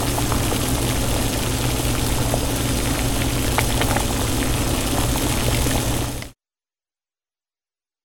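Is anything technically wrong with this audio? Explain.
Yes. At 5.96 s, compressed frames are skipped. A few whole frames, which fits a frame length of about 23 ms, never reach the output. The sound jumps ahead by roughly a tenth of a second. The frames on either side are joined directly at that point.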